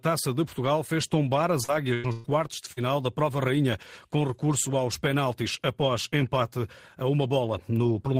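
This speech clip suffers packet loss at several points. Short concealed packet loss hits at 1.63–1.71 s, right after "fez tombar", and again at 2.72–2.80 s. About 40 ms failed to arrive each time, so the decoder extended the preceding sound, leaving a brief smear or wobble. Lost packets rebuilt from error correction appear at 1.68–1.70 s, 2.03–2.05 s and 2.77–2.79 s. In each, the decoder played a 20 ms low-bitrate backup copy, so there is no gap but those moments sound rougher and noisier. A burst of packet loss at 1.94–2.08 s dropped about 100 ms, and a second at 2.12–2.27 s dropped about 120 ms. In both, concealment stretched the last sound into a held buzz or fading hiss before the speech resumed further on, with the intervening audio gone.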